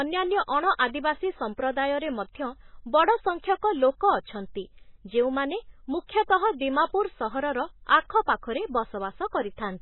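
Heavy MP3 compression runs through the whole of this speech clip, and it is the likely cause of the damage heard throughout. Nothing survives above 4 kHz, so the top of the sound is simply gone and sibilants lose their edge. The thin, watery swirl points to a very low bitrate, around 16 kbps. At that rate the encoder drops weak frequency lines that flicker in and out from frame to frame, and it smears the attacks.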